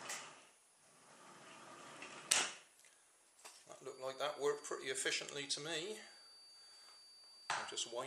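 From 3.83 s to the end, a feedback whistle sits behind the audio: a thin, steady tone at 4.6 kHz, around 20 dB below the main signal, swelling and fading slowly in level. The likely cause is a loudspeaker-to-microphone loop held just at the edge of feedback.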